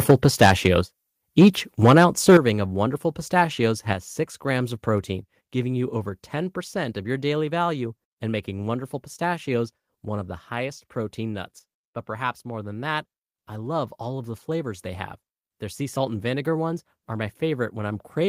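Microphone overload appears from 0.09 to 0.66 s, with peaks about 10 dB beyond the converter's limit. The input was likely set too hot for the converter, so a small share of samples have flattened tops, giving the loudest syllables a harsh, crackling edge. A microphone volume step-down lands at 0.11 s, just inside that burst. The gain drops about 4 dB at once, likely the call software reacting to the clipping by cutting the device's input level. Speech and room tone both fall together.

Overload returns at 1.40 to 1.48 s, about 5 dB over. This brief burst has the largest clipped share, roughly a sixth of its samples, and sounds gritty. It returns again from 1.84 to 2.37 s, about 6 dB over, with a moderate portion squared off and rasping.

Right as that burst ends, at 2.37 s, a second step-down cuts the level by about 10 dB. This is the deepest drop. A third step-down follows at 3.93 s, taking about 4 dB more. 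Each is a sudden change in loudness rather than a fade.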